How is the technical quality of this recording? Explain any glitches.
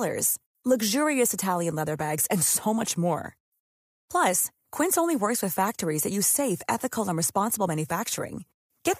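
The recording has one glitch, a repeated buffer at 4.74 s, just before "only works with factories". Fresh audio failed to reach the playback device in time, so it replayed its last block of about 1.33 ms, which fits a 64-sample buffer, twice more. A few milliseconds of real speech were skipped. Because the repeated block is so tiny and the joins between copies are abrupt, the result is a brief click or buzz rather than an audible stutter.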